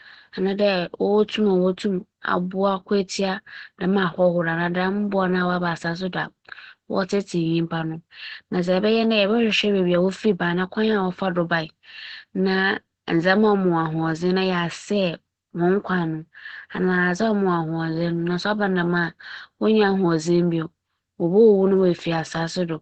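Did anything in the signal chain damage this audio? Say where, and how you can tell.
Yes. Opus voice compression runs throughout the speech, at the codec stage. Nothing is present above 8.6 kHz, which fits wideband SILK coding, and the plainly muffled texture comes from the narrowed band, while the slightly hoarse, robotic quality comes from coarse excitation coding, which fits a bitrate around 12 kbps.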